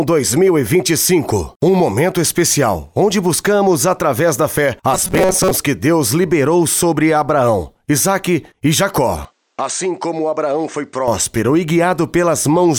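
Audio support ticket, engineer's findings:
Rigid metallic buzz near 188 Hz, 4.94–5.52 s. Robotic sound from repeated short buffers: likely starved input, about half the audio replaced by repeats of a roughly 5.3 ms buffer.

Sound turns duller and slightly quieter, no gap at switch, 9.25–11.08 s. Input likely switched to a poorer device: narrower band, faint new noise floor.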